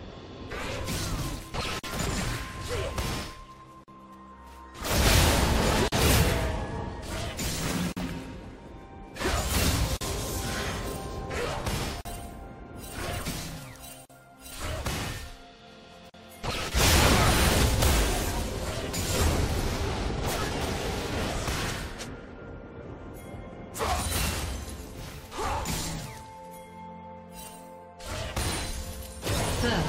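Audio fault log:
1.79, 3.84, 5.88, 7.92, 9.97, 12.01, 14.05 and 16.10 s: gap at a join of encoded pieces. Roughly every 2 s there's a hole of about 44 ms. The encoder's start-up silence and last-frame padding were never trimmed, so the sound drops out and then picks up right where it left off.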